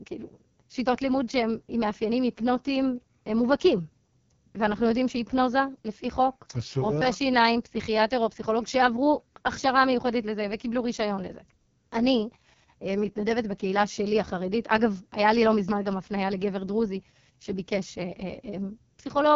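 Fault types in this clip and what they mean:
AMR wideband (HD Voice) codec: the speech is carried through the codec's lowest mode, which fits 6.6 kbit/s, and the damage is heavy. Content ends near 7.3 kHz, with the top band filled by shaped noise, and the modelled voice below it comes out rough and raspy throughout.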